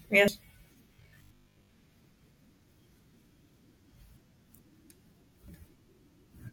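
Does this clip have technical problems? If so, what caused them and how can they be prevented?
Yes. Dropped buffers (overrun) at 0.28, 2.04, 2.79 and 5.48 s are heard as jumps where the speech skips ahead with no silence, losing roughly a tenth, a fifth, a tenth and nearly a third of a second. The likely cause is the program falling behind the capture hardware. That missing silence sets them apart from dropouts. Giving the recording thread higher priority or using larger capture buffers would prevent them.

Robotic sound from repeated short buffers runs from 0.95 to 1.71 s, a rigid 50 Hz buzz that loosely tracks the speech. This fits a 20 ms buffer repeated in place of most of the real audio. The fixed buzz pitch distinguishes it from ordinary codec distortion. Keeping the audio feed steady with enough buffering would avoid the repeats.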